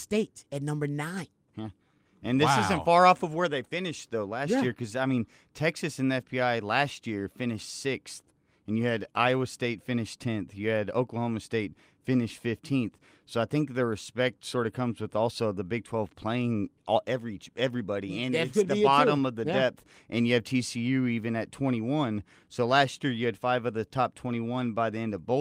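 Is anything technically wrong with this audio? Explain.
No, nothing technically wrong stands out here; the speech comes across steady and intact the whole way, with nothing that calls for a closer look.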